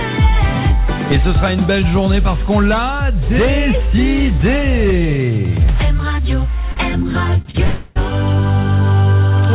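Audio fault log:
6.72–6.78 s, 7.42–7.47 s, 7.51–7.56 s: short stall from a late packet. Each time a packet arrived after it was due. The jitter buffer ran dry. The receiver stretched the last sound to cover the wait, for 44 ms, 30 ms and 29 ms. Then playback went on from the same point. So nothing is lost. A sound is simply held too long, with a brief buzz or dip. The timing slips later each time by the amount that was filled.
7.64–7.98 s: call audio freeze. For 316 ms the last sound is carried on as a fading buzz or hiss. It never drops to silence. The likely cause is packets held up in transit, so the jitter buffer emptied and the receiver filled the wait. When the packets came in, the audio resumed where it had stopped. Nothing is missing, but a gap has been inserted. The band ends at 4 kHz, which fits the G.711 mu-law call path at 64 kbps.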